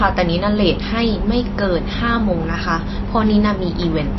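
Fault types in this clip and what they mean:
MP3 compression: Throughout, the speech has nothing above 5.8 kHz and a watery, swirling quality, likely from heavy MP3 encoding at a low bitrate near 25 kbps. Short of bits, the encoder cuts the treble and drops weak frequency lines that flicker between frames.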